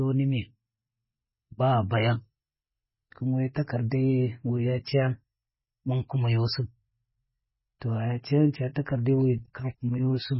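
From start to finish the speech has a hard ceiling at 5.5 kHz, with nothing above it, and the heavy damage is likely MP3 compression at a very low bitrate, which fits roughly 16 kbps. Starved of bits, the encoder drops the treble and lets weak frequency lines flicker on and off between frames, so the sound turns watery and swirly and s sounds chirp metallically. A simple low-pass filter would dull the top end without that warbling texture.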